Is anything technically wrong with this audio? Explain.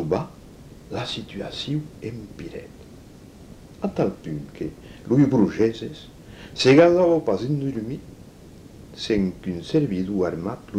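No, nothing technically wrong stands out here; it all sounds perfectly fine to me.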